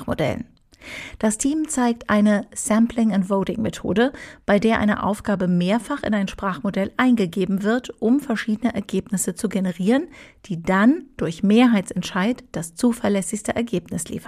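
There are no technical faults to describe anywhere in this speech recording.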